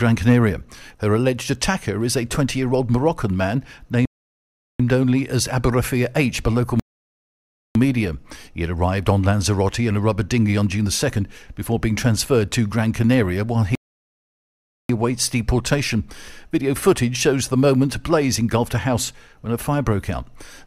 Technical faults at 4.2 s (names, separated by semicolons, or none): rebuffering stall